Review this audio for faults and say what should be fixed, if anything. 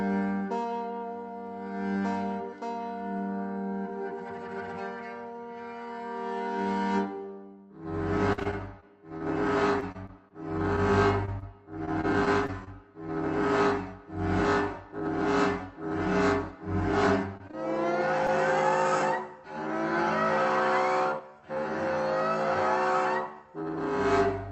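Between 8.33 and 12.68 s the sound turns choppy, with small pieces dropping out again and again: repeated packet loss with a robotic sound. Roughly eighteen separate holes fall in that stretch, the longest about 49 ms. Each was patched by extending the last received sound before real audio resumed, and because the next hole arrives so soon, the patches merge into a mechanical stutter. Steadier network delivery or a deeper jitter buffer would prevent this.

Around 17.4 to 17.5 s there are brief smears and wobbles: short concealed packet loss at 17.37 to 17.41 s, 17.47 to 17.51 s and 17.51 to 17.55 s. Each hole is about 20 ms, the size of one lost packet. The decoder bridged each gap by continuing the preceding sound and then blended back, so a very short sound in that spot could be lost. Forward error correction in the Opus stream would let such isolated losses be recovered instead of guessed.

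The Opus call path, whose top end stops near 8 kHz, is not at fault.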